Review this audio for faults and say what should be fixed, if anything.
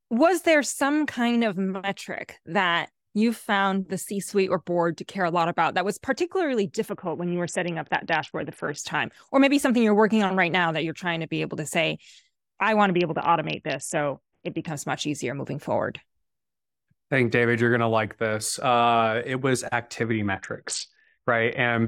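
Three Bluetooth SBC bit pool drops: 6.89–8.79 s after "about that was particularly", 12.87–14.68 s before "much easier moving forward", and 20.03–21.74 s after "it was". Each time the speech dulls and turns gritty as the upper sub-bands are starved of bits, consistent with a bit pool falling from 31 to 6, near 55 kbps. Reduce link congestion or enforce a higher minimum bit pool.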